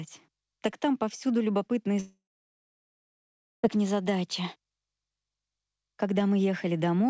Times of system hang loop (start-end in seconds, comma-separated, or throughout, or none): none